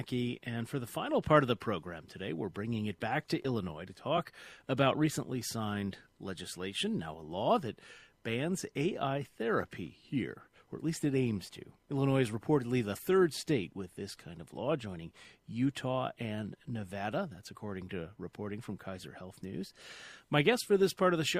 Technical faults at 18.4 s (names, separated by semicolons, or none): sample clock jitter